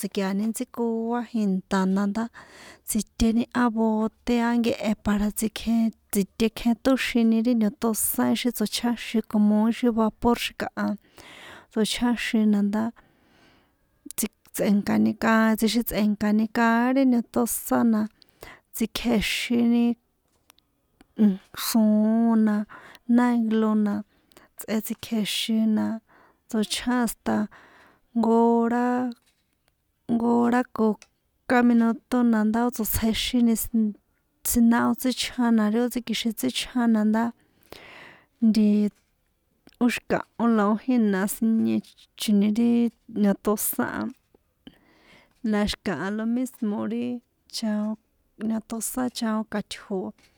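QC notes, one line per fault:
Nothing stood out on listening to this speech recording.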